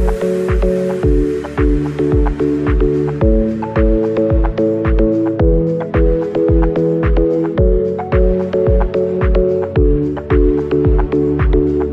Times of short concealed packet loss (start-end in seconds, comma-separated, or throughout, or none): none